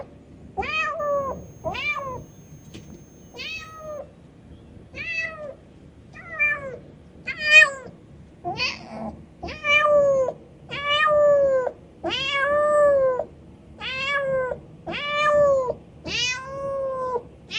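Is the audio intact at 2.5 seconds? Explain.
No. At 2.5 seconds you're right in the middle of a switching supply whistle that runs from about 0.99 to 3.99 s. It's a thin, high tone sitting between roughly 6.3 and 6.6 kHz, wandering a bit within that band, and it stays quiet, something like 35 dB under the sound. That's a switching power supply dropping into an audible burst mode or beating against another supply.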